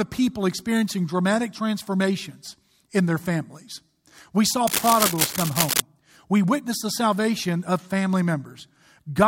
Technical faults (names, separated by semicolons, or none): cable scratch noise